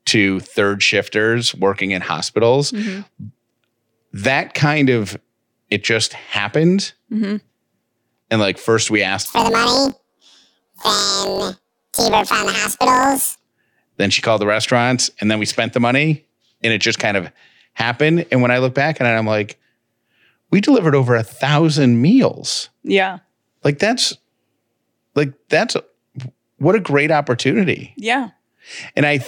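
The clip is speech. From 9.26 to 13.39 s it suffers from planar audio read as interleaved. Each block of about 21.8 ms stores all left samples, then all right samples. The player takes them as alternating pairs instead. So every block plays twice at double speed, left half then right half. The pace holds, but the sound jumps an octave high. A robotic buzz rides on it at the block rate of 45.9 Hz.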